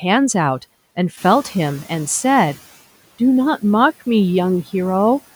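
Speech, with room noise that jumps by about 11 dB around 1 s, to about 21 dB below the voice, and surges through from 1.17 to 2.67 s before sinking back. It's a noise suppressor catching up: its noise estimate needs about 1.5 s to follow the rise before applying its full cut of about 11 dB.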